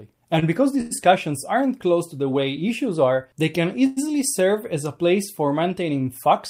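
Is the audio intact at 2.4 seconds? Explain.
Yes, at 2.4 seconds the audio plays through cleanly with no dropout, click, distortion or other fault.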